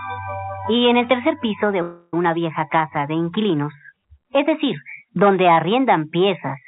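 At 1.82 s, delayed packets likely drained the jitter buffer, causing a call audio freeze: until 2.14 s the last sound stretches into a fading buzz, then resumes intact, about 0.31 s later.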